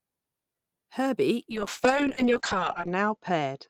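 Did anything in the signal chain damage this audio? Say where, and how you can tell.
Yes. A call bitrate drop at the codec from 1.51 s onward: the encoder falls from 32 to 7 kbps, so the speech turns coarse and muffled as bandwidth narrows from 20 kHz to 8 kHz.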